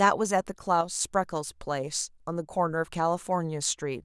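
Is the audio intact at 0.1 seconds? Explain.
Yes, the audio is intact at 0.1 seconds, with no fault at that moment.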